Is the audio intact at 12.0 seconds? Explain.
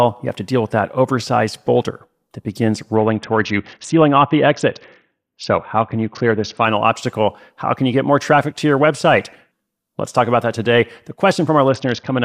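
No, a Bluetooth SBC bit pool drop runs from 11.69 to 12.25 s: the link cut its bit budget, consistent with about 60 kbps, dulling treble and adding gritty noise.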